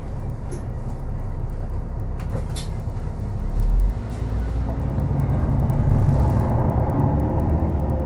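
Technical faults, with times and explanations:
Throughout: resampler restarted on every block. Each 100 ms block was converted separately, so every edge carries a small error, heard as ticks at 10 Hz only while sound plays. A spectrogram shows faint vertical lines every 100 ms; an empty band above 12 kHz suggests upsampling from 24 kHz to 48 kHz.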